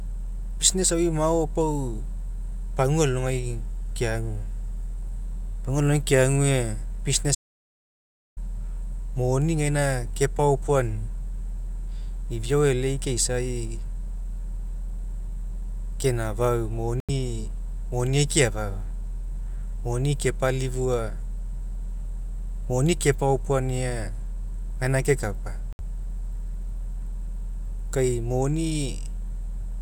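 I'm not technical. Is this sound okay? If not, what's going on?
No, not quite. From 7.35 to 8.37 s the speech cuts to dead silence for about a second, likely an audio dropout to silence, where the input was lost and the recording kept going.

There are two much shorter holes at 17.00 s and 25.73 s, right after "gaina kekapa", each under a tenth of a second. They're likely Bluetooth dropouts, where the wireless link briefly missed audio.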